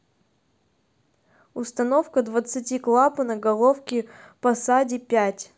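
No technical faults can be heard anywhere in the recording.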